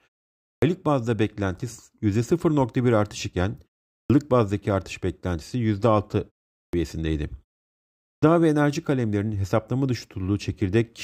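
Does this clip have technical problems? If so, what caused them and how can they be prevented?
Yes. There is a clipped start after a pause at 0.52, 4.0, 6.63 and 8.12 seconds. Each time, about 0.1 s of the opening sound is missing, and the speech begins abruptly out of silences of 0.4 to 0.76 s. The output device went to sleep during the quiet and needed roughly 100 ms to wake and lock before it passed audio again. Muted pauses would only drop the background while every sound returns whole. Here the start of the sound itself is swallowed. Disabling the device's power saving, or keeping a low continuous signal running through pauses, keeps it awake and prevents this.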